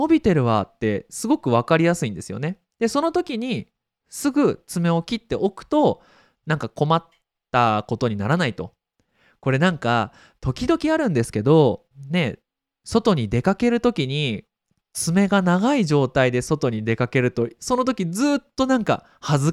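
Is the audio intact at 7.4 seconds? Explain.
Yes, the audio is intact at 7.4 seconds, with no fault at that moment.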